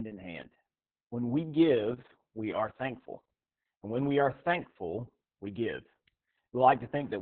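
From start to finish the speech carries heavy Opus voice compression. The SILK coder has squeezed it into a narrowband channel, so a spectrogram shows nothing above 4.9 kHz, with blurred, coarse harmonics below. It sounds muffled, hoarse and slightly robotic, which fits a bitrate near 6 kbps.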